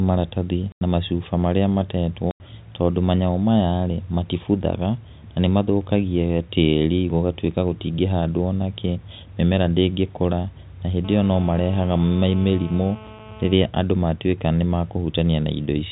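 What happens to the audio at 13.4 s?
At 13.4 s a hard, raspy buzz sits steadily about 20 dB below the speech, rich in harmonics of 217 Hz. It is GSM phone buzz, running from 11.05 to 13.54 s: a nearby 2G phone in a call pulses 217 times a second, and the audio circuitry rectifies those bursts.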